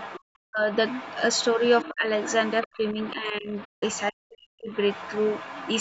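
An echo canceller that likely failed to remove the loudspeaker signal lets the other side's voice leak through from 0.0 to 0.2 s, 0.72 to 1.88 s, 2.22 to 4.01 s and 4.71 s to the end. A second voice sits roughly 15 dB under the main talker.

When both sides talk at once, the canceller likely cannot tell its own talker from the echo, so speech is suppressed in double talk at 0.45 to 0.7 s, 1.85 to 2.12 s, 2.63 to 3.54 s and 4.12 to 4.71 s. The voice dips by roughly 40 dB in the first and last of these and by about 15 to 20 dB in the middle two.

From 3.64 to 3.83 s the player likely ran out of data, causing a playback stall. The sound stops dead for about 0.17 s and then resumes.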